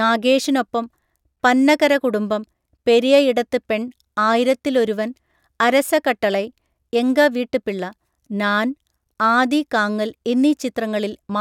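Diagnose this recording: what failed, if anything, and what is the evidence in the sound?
Nothing failed in this speech recording. No stage in the chain, from capture through to playback, leaves any audible evidence of a problem.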